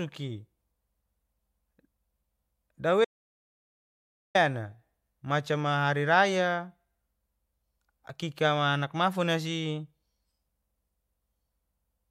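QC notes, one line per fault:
3.05–4.35 s, audio dropout to silence: the input feed was likely lost, through a disconnect, broken link or accidental mute, while recording carried on writing silence. The speech cuts off abruptly, leaving 1.3 s of silence with no room tone, then resumes mid-flow.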